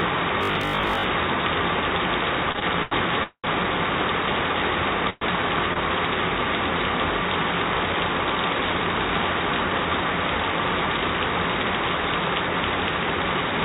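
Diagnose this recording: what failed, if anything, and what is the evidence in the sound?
Between 0.43 and 1.03 s the sound turns into a rigid, metallic robotic buzz from repeated short buffers, pinned at 50 Hz. That fits a 20 ms chunk being replayed over and over while most of the fresh audio gets skipped, likely an audio buffer or driver underrunning.

The repeated stalls (stutter) between 2.52 and 2.93 s are in the network and jitter buffer stage. There are four separate hitches, about 133 ms of filled-in sound in total, the longest around 80 ms. Packets kept arriving late, so the buffer drained repeatedly and the receiver padded each gap. Nothing is actually lost, but the audio drags.

You get two call audio freezes, likely from packets held up on the network. From 3.23 to 3.46 s the last sound is carried on for about 204 ms, including about 80 ms of silence, before playback resumes right where it stopped. 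From 5.10 to 5.23 s there's a shorter 116 ms hold with no silent stretch.

The short stall from a late packet at 5.73 to 5.78 s is a quick jitter-buffer hiccup. One packet missed its slot and the receiver stretched the previous sound by about 23 ms, giving a slightly held moment before carrying on. On the call path itself, the G.711 codec band-limits everything to nothing above 4 kHz.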